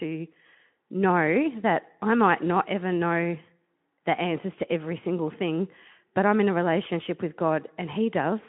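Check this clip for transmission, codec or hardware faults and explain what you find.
Nothing turns up here that needs explaining, just speech coming over a narrow Speex-coded line that tops out around 3.8 kHz, which is simply how that kind of link sounds.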